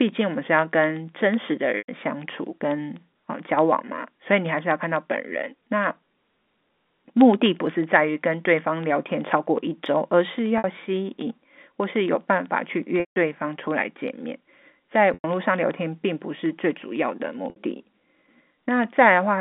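From 0.09 s to 19.3 s, regular ticks sound eight times a second while there is signal. These are periodic USB or driver dropouts: every 0.125 s a tiny sliver, well under a millisecond, is replaced by silence.

Briefly held tones that fade into silence appear at 1.78–1.88 s, 10.58–10.64 s, 13.0–13.16 s, 15.14–15.24 s and 17.5–17.56 s. This is packet loss with pitch repetition: 60 to 160 ms gaps were bridged by repeating the last pitch period.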